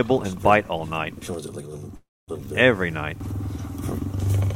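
At 1.95 s a call audio freeze stops the sound for about a third of a second: a brief fading buzz, then roughly 240 ms of silence, before it resumes at 2.30 s with nothing lost but now about 325 ms late. This is likely from packets stalling and the jitter buffer running dry. On a waveform it shows as a decaying smear then a flat gap; a spectrogram shows a blurred band fading to an empty column.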